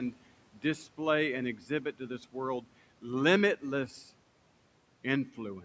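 Parts of the speech sound swallowed at 0.11 to 0.23 s, 1.57 to 1.70 s and 1.93 to 2.35 s, dipping by about 12, 9 and 10 dB. This is speech cut by the noise suppressor, which mistook these sounds for background noise and turned them down with the room noise.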